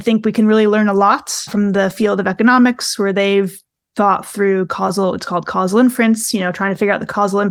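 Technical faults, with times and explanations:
Listening through this recording of speech, nothing stood out as a technical problem.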